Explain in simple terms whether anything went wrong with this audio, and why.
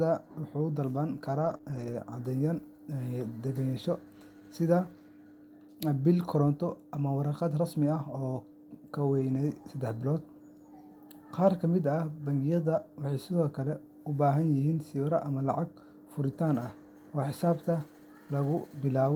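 Three times in this speech call, packets went missing but were rebuilt from error correction. The packet that followed each lost one carried a rough backup copy, and the decoder played that copy instead, so there is no silence. This happens from 1.41 to 1.55 s, from 1.65 to 1.95 s, and briefly at 9.19 s. In those spots the speech turns grainier and noisier for a moment, then clears up again.

Between those first two rebuilt stretches there is also short concealed packet loss. Two pieces of the call, from 1.57 to 1.61 s and from 1.61 to 1.65 s, arrived too late and had no backup copy. The receiver filled each hole by stretching out the sound that came just before it, then blended back into the real audio. You hear this as a quick smear or wobble, and a short consonant there may drop out entirely.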